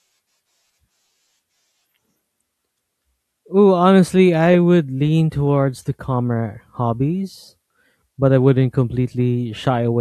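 No faults detected anywhere in the speech recording.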